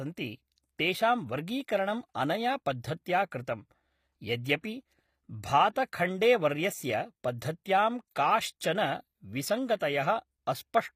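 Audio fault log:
throughout, HE-AAC compression: likely a low-bitrate HE-AAC encode, around 24 kbps, rebuilding treble from copied lower bands, so the highs sound plainly synthetic and stop at 15.5 kHz.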